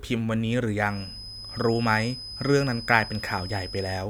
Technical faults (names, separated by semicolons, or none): feedback whistle